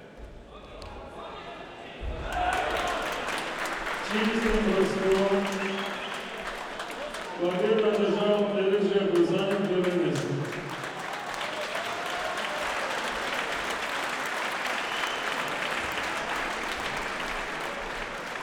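A recording of everyday sounds, and there's nothing technically wrong to point to anywhere in it.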